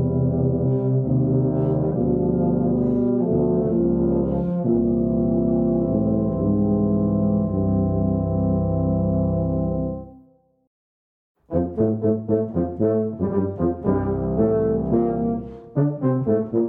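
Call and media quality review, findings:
No audible faults were found in the clip. Nothing in it calls for follow-up on the call or media path.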